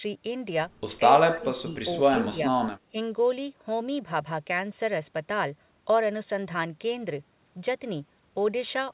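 An echo canceller that likely could not tell the talker from loudspeaker echo turned both down, so the speech is suppressed in double talk. It dips by about 10 dB at 0.98–1.02 s, about 30 dB from 1.28 to 1.87 s, and about 10 dB at 2.11–2.35 s.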